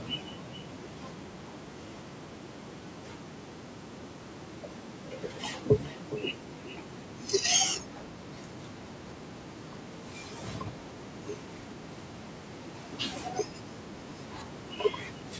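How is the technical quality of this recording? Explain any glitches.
The speech has one clear glitch: an echo leak. From 5.83 to 6.33 s, a delayed copy of the speech comes back, about 415 ms behind the original. It sounds like a second, later version laid over the first, and it is roughly 5 dB louder than the speech itself. The likely cause is a far end playing the call on a loudspeaker. Its echo canceller missed part of what its microphone picked up, and that part was sent back. The band stops at 8 kHz, which fits call microphone processing.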